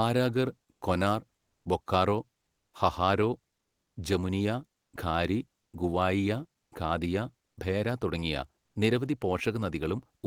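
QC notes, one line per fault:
1.39–1.63 s: comfort noise in place of the background. For 240 ms the real room tone, sitting about 55 dB below the loudest speech, gives way to a flat, featureless hiss about 2 dB louder. The likely cause is discontinuous transmission in an Opus-style codec, with the receiver filling the pause with synthetic noise.
4.81–4.93 s: comfort noise in place of the background. The same swap lasts 120 ms. Here the substitute noise sits about 1 dB quieter than the real background.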